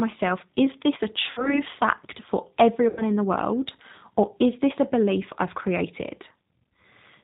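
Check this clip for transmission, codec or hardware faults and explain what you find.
Two faults are audible.

Throughout, the speech sounds rough, slightly synthetic and cut off above 4 kHz. This is G.729 codec damage, which fits an 8 kbit/s link that rebuilds speech from a vocal tract filter, a pitch predictor and sparse pulses.

At 1.31–1.62 s, between "is this a" and "fact for", and at 2.88–3.03 s, between "fact for" and "in the world or", the sound smears into a fading buzzy tone or coloured noise and then recovers weakly. This is VoIP packet loss concealed by the speech codec: the decoder stretches its last pitch and filter across roughly 60 ms and 90 ms of missing audio, which fits two and three lost packets.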